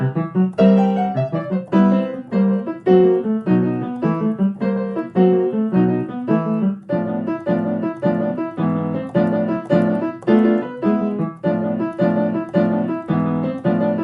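Listening through, nothing in the audio stood out as a technical problem.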